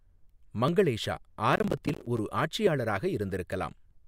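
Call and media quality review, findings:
Overlap between stream segments: single micro-skips at 0.68, 1.68 and 2.67 s, spaced 1.0 s apart, pointing to the segmenter/packager. Overlapping time stamps make the player trim a few milliseconds of real speech, so the waveform jumps. Unlike overload crackle, these are isolated, evenly spaced events.

Processor overload crackle: gritty tearing burst from 1.53 to 2.19 s, likely from the audio processing thread missing deadlines. Around twenty short silent dropouts of about 10 ms each, which fits a roughly 10 ms buffer. Unlike segment overlap, this is a dense cluster that stops when the load passes.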